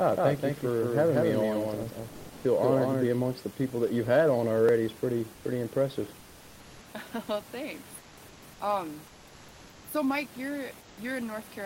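From the start until 3.06 s, just before "amongst the people that", there is a doubled audio track. A second full-band copy at about the same level trails by roughly a fifth of a second. It is dry, with no room colour. The likely cause is a second capture over a slower path. The copy stops abruptly at 3.06 s.

Comfort noise in place of the background fills pauses at 2.09–2.44, 5.34–5.44, 6.19–6.83, 7.98–8.17, 8.28–8.42, 9.07–9.84 and 10.81–10.97 s. There, the textured room noise, which sits about 24 dB below speech, turns into a flat, featureless hiss. This is likely discontinuous transmission, consistent with Opus DTX.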